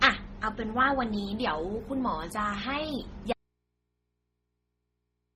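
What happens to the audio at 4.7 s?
The speech is gone at 4.7 s. An audio dropout to a faint residue begins at 3.33 s and lasts to the end of the clip. The signal is lost abruptly, not faded. The path after the break stays live, so the gap holds only mains hum at a very low level, roughly 50 dB below the speech. This likely points to a feed that failed upstream while the input stayed open and picked up hum.

Underneath, the whole clip carries transcoding between lossy codecs. The sound likely passed through MP3 at 32 kbit/s and then Opus at 24 kbit/s. The second encoder spent its scarce bits re-coding the first one's smearing and added its own. Nothing remains above 15.8 kHz, and the two sets of artefacts are heard together.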